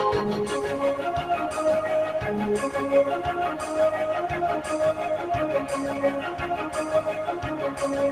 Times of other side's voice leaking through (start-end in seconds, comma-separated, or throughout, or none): none